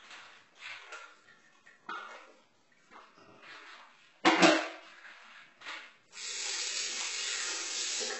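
Throughout, the treble sounds gritty and metallic and stops at 8 kHz, likely from heavy HE-AAC compression, whose replicated upper bands fit a very low bitrate around 8 kbps.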